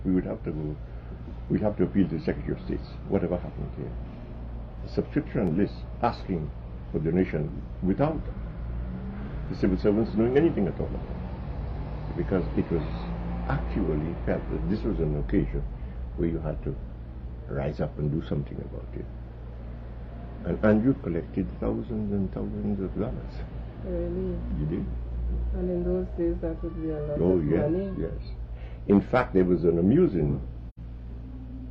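From 1.48 to 9.48 s, periodic USB or driver dropouts occur every 2.0 s. Something stalls the audio path at a fixed interval. Each time, a tiny slice, roughly half a millisecond, is skipped rather than silenced. The result is a regular tick under the sound.

At 30.69 s, AAC frame loss with muting leaves a gap of 85.3 ms, ending at 30.79 s. That length fits two lost frames. The decoder zeroed their spectrum, and the overlapping windows fade the sound out and back in, giving a soft-edged hole.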